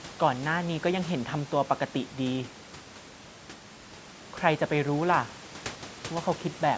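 No technical faults can be heard: the speech carries the ordinary shaping of call microphone processing, with its lowest bass filtered out and nothing above 8 kHz, and the room noise sits about 21 dB below the voice.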